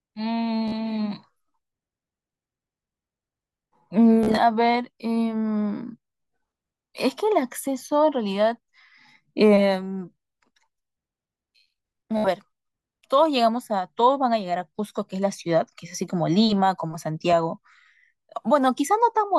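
At 0.68 s, 4.23 s and 12.17 s the speech breaks into Bluetooth stutter: packets arrived late or not at all, so the receiver kept replaying its last short slice of audio. The first event, to 0.73 s, loses about 42 ms; the second, to 4.39 s, loses about 98 ms scattered over 140 ms in runs up to 42 ms; the third, to 12.27 s, loses about 70 ms. Each is heard as a brief machine-gun buzz, after which the speech jumps ahead.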